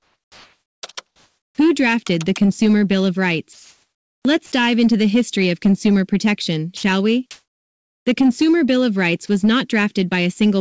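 From 0 to 0.83 s, 1.07 to 1.58 s and 3.53 to 4.25 s, the faint background gives way to comfort noise in place of the background, likely from discontinuous transmission. It is a steady, featureless hiss, level at first, then about 7 dB and about 1 dB quieter. On a spectrogram these stretches look smooth and evenly speckled, without the background's texture.

At 4.46 to 4.52 s and 6.77 to 6.83 s, the sound is dropped by the voice detector, which likely judged it to be background. About 40 ms and 60 ms of sound vanish under brief flat noise, each showing as a small notch in the waveform envelope.

From 7.31 to 8.06 s, comfort noise again likely fills the background, this time about 29 dB louder than the real background. On the spectrogram this appears as a raised, uniform band of noise, cut off at 8 kHz like the rest of the G.722 call path.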